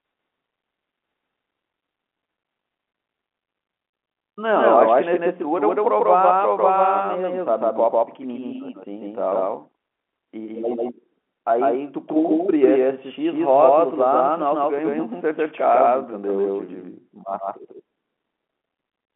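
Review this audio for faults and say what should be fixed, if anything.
The speech is most likely being mixed in twice: a second, slower capture path or an out-of-step edit adds a full copy of the same signal. This doubled audio track runs for the whole clip, with the copy trailing by about 150 ms at roughly the same level as the original. Every syllable is followed by a flat, dry repeat with no room decay. The repeat sits inside the narrow telephone band of the G.711 line, which cuts off near 3.8 kHz. To prevent this, make sure each source reaches the mix through only one path, and remove any duplicate monitoring feed or stacked edit.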